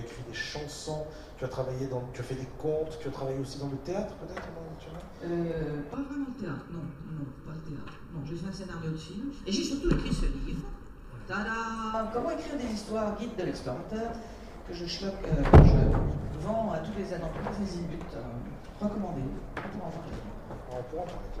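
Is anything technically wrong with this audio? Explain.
Yes. There is channel delay (comb filtering) from 5.94 to 11.94 s. One channel arrives under a millisecond late, so summing to mono cancels shared content at evenly spaced frequencies, the first around 700 Hz. The sound turns hollow and phasey.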